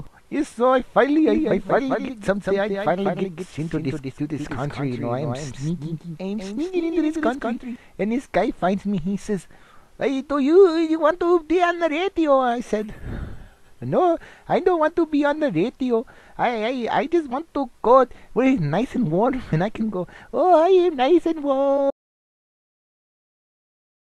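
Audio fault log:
1.28–7.76 s, doubled audio track: a second, full-band copy of the sound runs roughly 200 ms behind the original and about 5 dB quieter. It has no decay and no room colouring, and it starts and stops abruptly at the edges of the range. That sets it apart from an echo or reverb, which would fade and take on the room's tone. The likely cause is the same signal being captured a second time through a slower path.
21.77–21.79 s, compressed frames skipped: the audio jumps forward by a single 20 ms frame, which points to a codec using 20 ms frames. A frame that was missing or rejected as damaged was simply not played. The sound carries on at once, unlike a dropout, where a silent gap would be heard.
21.91 s to the end, audio dropout to silence: the sound cuts out mid-flow and never returns. What follows is silence with no room tone underneath, so this is not a quiet passage or a fade. 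The hard cut to complete silence also sets it apart from a codec skip, which only jumps ahead. The likely cause is a lost input, such as a disconnected device, a failed link or a stray mute, while writing continued.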